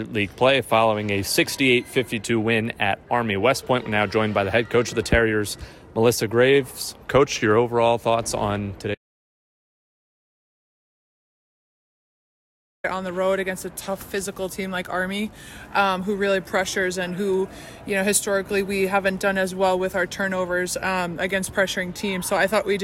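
An audio dropout to silence runs from 8.95 s to 12.84 s. The sound stops abruptly in mid-flow and is replaced by silence, with no room tone or background hiss underneath, then returns just as suddenly. The likely cause is a lost input, such as a disconnected device, a failed link or an accidental mute, while recording carried on writing silence. About 3.9 s of material is missing and cannot be recovered.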